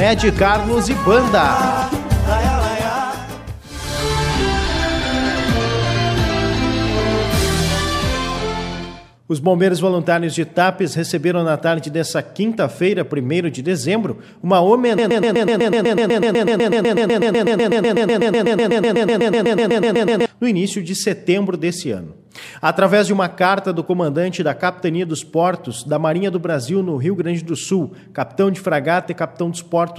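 From 14.98 s to 20.26 s the audio falls into a broken-record loop. A fragment about 0.12 s long repeats exactly, back to back, 42 times, giving a rapid stutter. The player or stream likely stalled and resent its last fragment. The audio for that stretch is lost.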